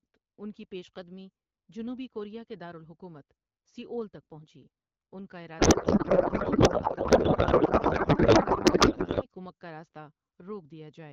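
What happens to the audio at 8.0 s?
A codec payload misread covers 8.0 s, running from 5.59 s, just after "تک پہنچی اُن کا", to 9.26 s, where "کُمک کا راست" comes back clean. The AMR wideband frames were packed in octet-aligned form but decoded as bandwidth-efficient, so every parameter field is read from the wrong bit positions. The decoder still produces output from these valid-looking frames, and the speech becomes garbled noise and warble that barely tracks what was said.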